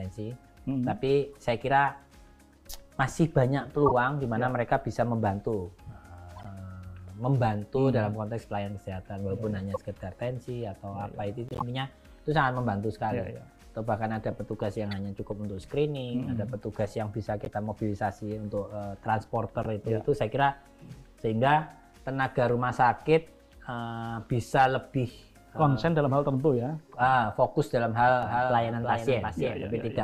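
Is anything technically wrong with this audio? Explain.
Yes. Short chirps and noise bursts at 3.86–3.92, 6.36–6.46, 9.74–9.77, 11.49–11.62, 14.91, 17.45–17.48 and 19.63–19.66 s are each a corrupt frame decoded: damaged compressed data scattered energy to the wrong frequencies. From 28.23 s to the end, a dry copy of the sound about 5 dB quieter trails about 0.3 s behind, likely a doubled audio track.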